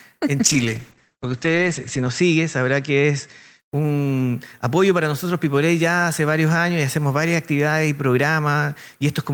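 From 0.4 s to about 3.65 s the audio goes through a call bitrate drop. The top end closes from 20 kHz down to 8 kHz and the texture turns coarse and watery, worst for about 1.7 s, which fits the encoder being pushed from roughly 32 kbps to about 10 kbps. A plain low-pass filter would only dull the sound, so the added graininess and the return of detail set this fault apart.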